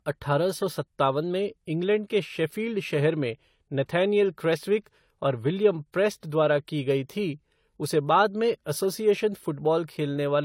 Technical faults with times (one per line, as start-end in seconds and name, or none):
0.00-10.45 transcoding between lossy codecs